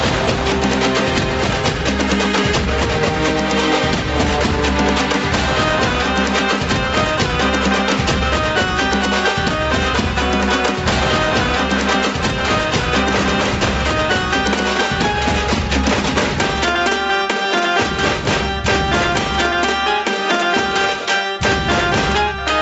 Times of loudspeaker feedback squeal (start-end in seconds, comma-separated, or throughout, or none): none